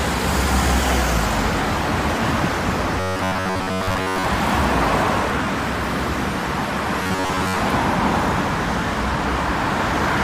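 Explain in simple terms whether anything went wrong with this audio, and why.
Robotic sound from repeated short buffers hits from 3.0 to 4.26 s and 7.03 to 7.58 s: a metallic buzz near 94 Hz, likely from one 11 ms snippet looping while most fresh audio went missing.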